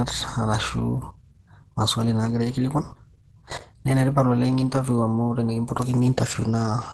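From start to finish the speech is dull, hoarse and grainy, with nothing above 12.1 kHz, likely from heavy Opus compression in its hybrid speech mode, at a rate near 12 kbps. Unlike MP3 damage, there is little swirling or holey warble.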